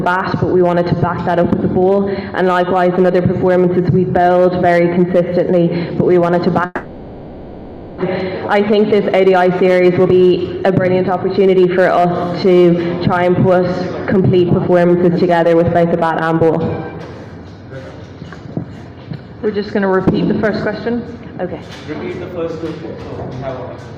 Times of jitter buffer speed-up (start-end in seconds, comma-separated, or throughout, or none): 8.54-12.05